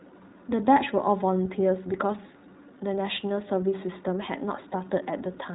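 The whole speech clip runs through the iLBC codec. Nothing above 4 kHz survives, so the sound is narrowband and boxed in. The coding damage is plainly audible as a rough, slightly synthetic grain. That fits the 20 ms frame mode at 15.2 kbps.

From 4.70 to 4.74 s there are lost iLBC frames, about 20 ms of missing audio. The decoder fills the hole by repeating the last pitch cycle mixed with noise. It sounds like a brief held, buzzy vowel. Clean decoding returns almost immediately.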